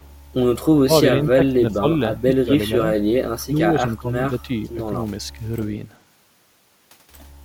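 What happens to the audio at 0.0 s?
An echo leak runs from 0.0 to 0.08 s: a very faint, delayed copy of the speech, roughly 40 dB below it and trailing by about 383 ms, surfaces briefly as a scrap. This is likely a far-end loudspeaker's output reaching its own microphone without the echo canceller removing all of it, so the remainder travelled back down the line and arrived late enough to sound separate from the original.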